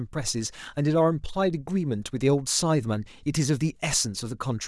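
A short speech recording, its signal holds steady throughout with no audible technical faults.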